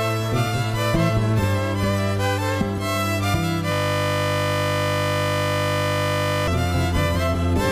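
A system hang loop runs from 3.72 to 6.48 s: the system froze while the hardware kept replaying one 20 ms buffer, producing a steady 50 Hz buzz.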